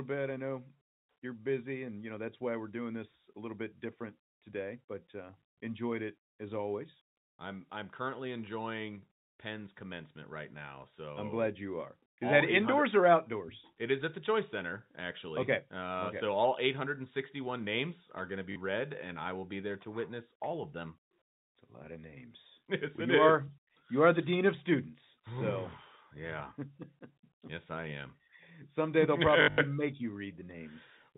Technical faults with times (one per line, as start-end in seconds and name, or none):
18.52-18.56 packet loss with last packet repeated
29.42-29.58 packet loss with last packet repeated